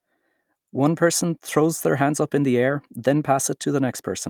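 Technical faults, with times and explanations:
No technical faults, with times and explanations, are found in this speech clip.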